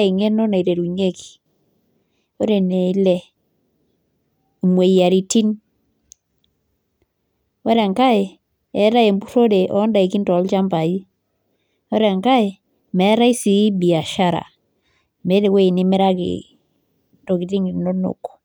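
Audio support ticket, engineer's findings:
Listened to the whole speech recording and found nothing wrong with it, so there's nothing to chase on our end for now.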